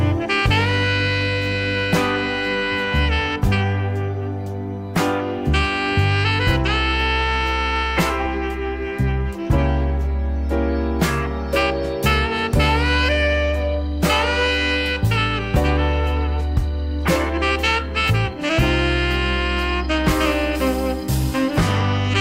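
Periodic clock jitter runs through the whole clip. The converter's sample clock is being shaken at a steady rate of around 100 Hz. That timing wobble puts sidebands above and below every component of the sound, spaced at that rate. Higher-pitched content is hit hardest. The result is a rough, metallic edge riding on the audio. It disappears whenever the sound stops, because silence has nothing to modulate.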